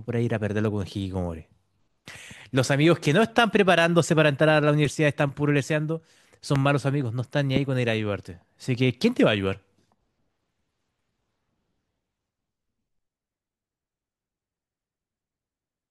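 A speech recording with two loud pops, one from 6.56 to 6.58 s and another from 7.56 to 7.59 s, each a single sharp hit jumping roughly 15 dB above the speech, which carries on underneath both. They're short, sudden steps rather than anything in the voice itself, most likely an electrical transient such as a plug, switch, static discharge or driver glitch dumped into the signal path and briefly shaped by the circuitry downstream.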